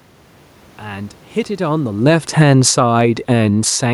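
Just after the talker shifts position around 1.5 s, the automatic gain starts falling, from 1.59 s to 3.91 s. The gain control judged the input too loud, or its background noise too strong, and lowered its level by about 11 dB, so voice and room noise sink together. The waveform envelope tapers steadily, and a spectrogram shows every band, background included, fading evenly.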